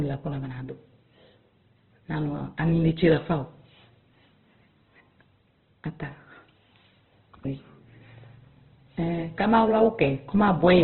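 Throughout, the speech has nothing above 4.2 kHz and sounds rough and grainy. This is likely heavy Opus compression, consistent with its CELT mode near 12 kbps.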